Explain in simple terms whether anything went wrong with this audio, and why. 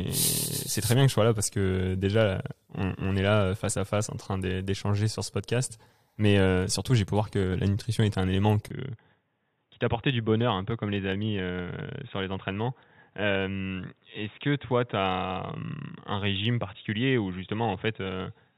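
Input switched to a poorer device at 8.68 s: after a tiny gap, the speech turns duller, boxier and a little quieter, with nothing above 3.8 kHz and a faint new hiss until the end. The recording likely jumped to a lower-quality microphone or headset.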